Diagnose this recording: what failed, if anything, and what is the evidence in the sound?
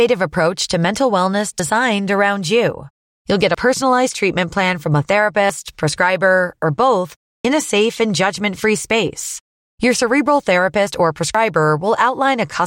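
The speech skips at 1.60, 3.55, 5.50, 7.45, 9.40 and 11.35 s, for example just before "personalized treatment plan from", between "prescriber or both" and "in a safe and", and after "cerebral therapist or". Each skip drops around 50 ms, and the sides butt together. The regular cadence points to audio missing between chunks, likely at the driver or buffer stage, where roughly 2 s blocks lose a sliver at each handover. On a waveform each skip shows as an abrupt discontinuity, and on a spectrogram as a thin vertical seam.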